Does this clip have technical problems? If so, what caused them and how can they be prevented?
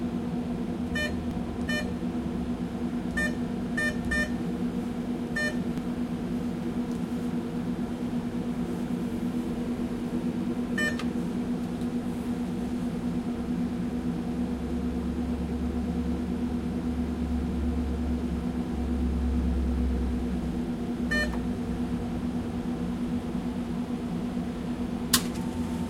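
Yes. Two points at 1.31 s and 5.78 s, where the sound jumps ahead, are likely a dropped buffer (overrun): samples overwritten before being read, losing roughly fifteen and five milliseconds. Prevent it by enlarging the input buffer and giving the capture thread higher priority.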